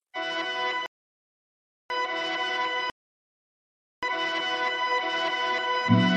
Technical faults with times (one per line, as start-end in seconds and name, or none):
0.86-1.90 rebuffering stall
2.90-4.03 rebuffering stall